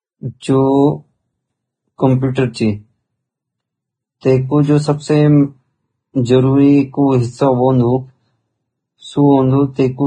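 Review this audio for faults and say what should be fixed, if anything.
The whole take has a hissy, grainy top with nothing above 9.7 kHz, pointing to heavy Vorbis compression, likely at a very low bitrate, around 19 kbps.

Pre-echo puts a brief hiss ahead of sharp attacks, from 0.40 to 0.43 s and from 4.21 to 4.23 s just before "तै कु जु सबसे", because block-spread quantisation noise leaks backwards.

Re-export from the original at a much higher Vorbis quality, or use a lossless format, and both problems should go away.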